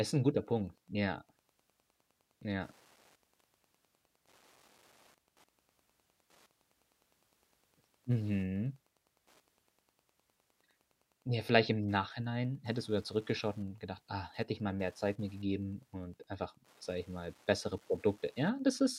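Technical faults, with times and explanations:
Throughout: Wi-Fi interference. A steady tick runs under the speech about ten times a second, spaced 102.4 ms apart. That spacing fits a nearby wireless radio's beacon being picked up and rectified by the audio circuitry. The ticking sits well below the speech, at a low level. On a waveform it appears as a row of small, evenly spaced spikes. A spectrogram shows thin vertical broadband lines repeating at that interval across the whole clip.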